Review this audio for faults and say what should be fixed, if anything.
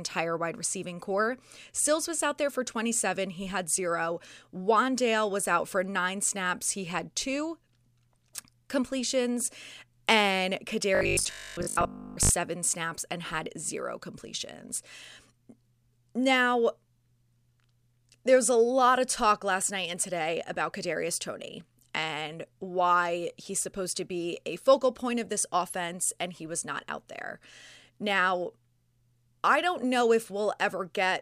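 Robotic sound from repeated short buffers runs from 10.95 to 12.31 s, ending just before "snaps and had zero". For about 1.4 s the speech turns into a rigid, metallic buzz at 50 Hz that only loosely tracks the words. The likely cause is audio arriving too slowly, with playback looping the last fragment, around 20 ms given that buzz, for most of the stretch while the real signal is dropped. Giving the receiving buffer more headroom and concealing missing audio instead of looping it would prevent this.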